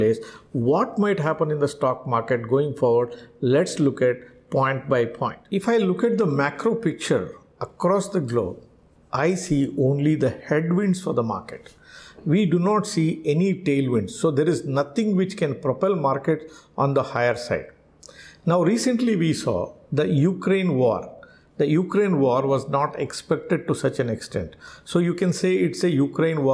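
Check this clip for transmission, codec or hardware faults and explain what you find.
No faults found, and nothing in the audio points to trouble anywhere along the signal chain.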